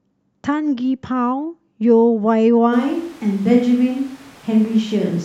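A speech clip that changes character abruptly at 2.74 s and stays that way to the end: the voice goes roomy and hollow, thinner in the low end, with background noise sitting around 25 dB under the speech while loudness holds about the same. It's likely a switch to a distant microphone, with the close mic dropping out.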